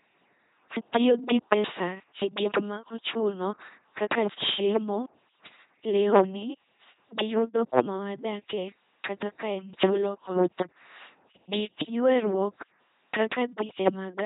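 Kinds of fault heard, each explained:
LPC-10 vocoder: throughout the clip, the speech is rebuilt rather than passed through. A short all-pole filter models the vocal tract and is driven by either a regular pulse train or noise, never a mix, so each moment is judged fully voiced or fully unvoiced. The damage is heavy: a buzzing, mechanical robot quality, buzz or hiss where voicing is misjudged, and nothing above 3.9 kHz, which fits a 2.4 kbit/s stream.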